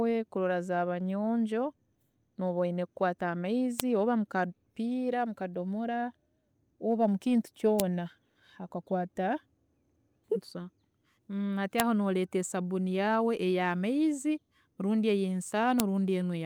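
Sharp snaps at 3.80, 7.80, 11.80 (just before "aho noreeta sabuuni yaawe") and 15.80 s are file header played as audio, recurring every 4 s regardless of signal.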